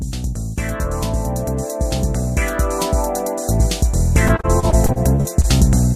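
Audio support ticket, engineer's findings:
Repeated packet loss (robotic sound), 4.27 to 5.46 s: choppy, robotic stretch, about ten short dropouts, longest 37 ms, each patched by stretching the last bit of sound. Roughly a fifth of that span is concealment.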